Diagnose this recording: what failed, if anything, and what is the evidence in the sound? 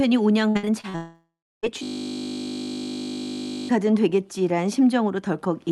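Repeated packet loss (robotic sound) sits at the network stage, from 0.49 to 0.96 s. Five short holes open in the speech, the longest 58 ms, about 200 ms missing in total. Each is filled by stretching the preceding sound, so 43% of that span is concealment, giving a choppy texture. Unlike a single dropout, real speech keeps breaking through between the gaps, and each patch is brief rather than a long fading tail.

A long network dropout follows straight on, from 0.96 to 1.65 s. The concealment tail buzzes and fades, then roughly 0.32 s of near silence remains before speech resumes with a chunk absent. About 0.68 s of audio is gone. The cause is likely a sustained interruption of packet delivery. What separates it from the preceding packet loss is one continuous hole with no speech fragments inside it, and a decaying rather than a stuttering fill.

A system hang loop occupies 1.83 to 3.69 s, at the driver or buffer stage. 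A 20 ms slice of audio repeats exactly, 93 times, producing a steady 50 Hz buzz. The buffer kept cycling while the host stalled, and around two seconds of real speech were never captured. Packet concealment fades and varies. This segment is identical on every pass and does not decay, which points to a frozen host with the hardware buffer still cycling rather than the network.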